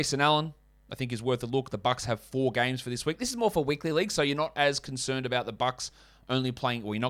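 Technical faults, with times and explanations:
3.14–3.91 s, drift correction step: clock-matching software likely jumped the playback rate to rebalance its buffer, speeding the speech up by about 6% for under a second, so pitch rises together with tempo, roughly a semitone (about 105 cents) sharp, then snaps back to normal.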